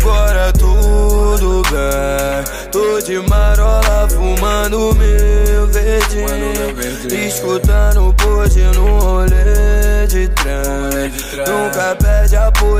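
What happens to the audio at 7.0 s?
Nothing goes wrong at 7.0 s: the audio plays through that moment intact, with no dropout, click, distortion or other audible fault.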